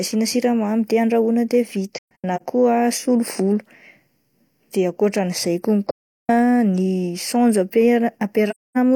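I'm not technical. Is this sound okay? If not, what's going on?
No. The speech drops to silence with soft edges at 1.95 to 2.42 s (a few short gaps), right after "de akoatran'izay" at 5.91 to 6.30 s, and at 8.50 to 8.78 s. This is AAC frame loss with muting: chunks of compressed audio went missing, and the player filled them with silence.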